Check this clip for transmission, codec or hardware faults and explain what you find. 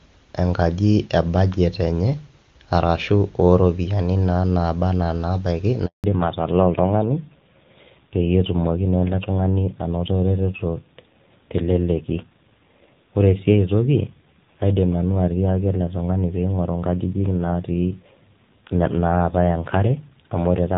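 Two faults show up, both tied to a network change partway through the call.

At 5.86 s a handover gap cuts the speech for 180 ms, until 6.04 s. While the call switched networks no speech frames arrived, so the sound fades within tens of milliseconds to silence. The waveform shows a flat stretch, and the spectrogram a blank vertical band.

From 6.04 s to the end comes a fallback to narrowband. The wideband HD Voice link, clean beforehand at a rate that points to 23.85 kbit/s, gave way to a narrowband codec, likely AMR-NB around 7.4 kbit/s. Nothing above 4 kHz survives, so the speech turns duller and rougher. The spectrogram shows a hard ceiling at 4 kHz.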